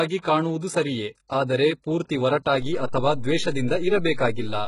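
From the start, the speech carries heavy codec damage. Nothing is present above 11.1 kHz. The treble that remains sounds rebuilt rather than captured. Sibilants turn gritty, metallic or lispy. Harmonics fail to line up across the crossover. This is likely HE-AAC compression. The codec keeps only the lower spectrum. It fakes the upper bands by copying lower ones upward under a coarse envelope. The damage fits a bitrate of around 12 kbps.

At 2.62 s, just after "ಸರಿಯೆ ಆದರೆ ಪೂರ್ತಿ", a DC step occurs. The waveform's zero line jumps to a new level. It stays shifted until the clip ends at about 4.7 s. The jump is heard as a low thump or click. The speech itself runs on unchanged. A converter recalibrating, or an input with an offset being switched in, would shift the baseline this way.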